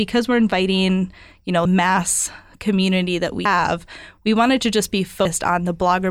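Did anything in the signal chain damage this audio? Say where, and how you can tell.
Yes. Audio missing between chunks, likely at the recording buffer: the speech jumps abruptly at 1.65, 3.45 and 5.25 s, each skip losing about a fifth of a second.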